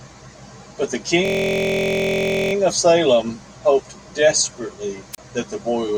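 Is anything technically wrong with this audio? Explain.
Yes, there are two faults in this speech clip.

System hang loop, from 1.25 to 2.53 s: the playback side stalled while the sound hardware kept replaying the last filled stretch of its ring buffer. A 23.22 ms segment, which fits a 1024-sample buffer, repeats about 55 times at 43.1 Hz. This is heard as a steady, pitched buzz that replaces the speech for over a second. Little or no audio is lost; the speech resumes from where it stopped.

Wireless microphone squelch dropout, from 5.13 to 5.18 s: the analogue FM radio link weakened until the receiver's squelch cut the output. There is a short rise of hiss or static, then a hole of near silence lasting 31.4 ms, after which the speech returns. The gap is brief enough to sound like a sudden blink in the audio rather than a pause.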